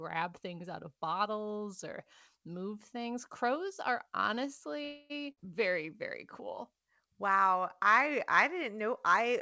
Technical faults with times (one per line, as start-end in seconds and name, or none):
4.84-5.12 call audio freeze
5.32-5.39 burst of packet loss